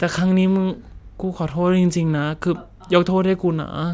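No technical faults are audible.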